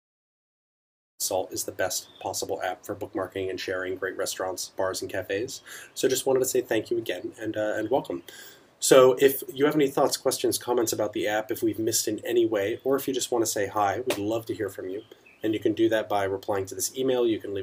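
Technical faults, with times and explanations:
Nothing here counts as a technical fault, and the gentle fade-in that finishes at about 1.23 s is just an editor's smooth ramp-up in level, with no click or hard edge.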